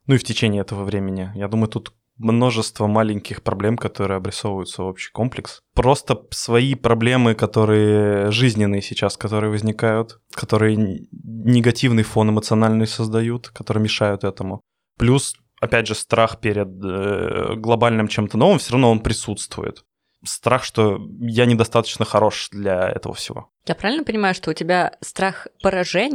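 No technical faults detected.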